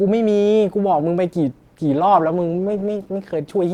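From 1.52 s to the end, a call bitrate drop from 64 to 14 kbps makes the speech coarse and watery; the spectrogram turns blotchy and smeared.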